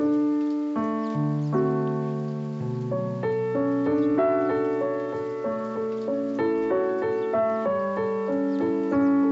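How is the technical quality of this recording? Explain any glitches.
Nothing stood out on listening: the audio carries the usual shaping of a call's microphone processing, with its lowest bass trimmed and nothing above 8 kHz, and no glitches could be heard anywhere in it.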